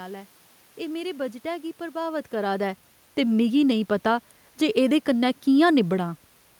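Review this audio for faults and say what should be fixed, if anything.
Nothing in the signal path needs fixing: the background noise of the room and the change in level at about two seconds, where the talker shifts relative to the microphone, belong to the recording itself rather than to the system.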